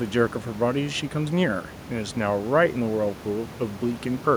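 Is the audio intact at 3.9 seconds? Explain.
Yes, at 3.9 seconds the audio is intact, with only the room's background noise sitting about 17 dB below the speech.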